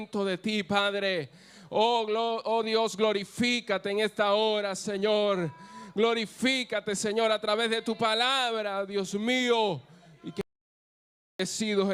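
At 10.41 s the sound just stops dead and stays out until 11.40 s, so close to a full second is gone. That's an audio dropout to silence: the gap is silent, with no room tone or hiss underneath, which tells you the input itself went away rather than the level dropping. The likely cause is a lost connection or a brief mute upstream while recording carried on, so whatever happened in that stretch simply isn't there.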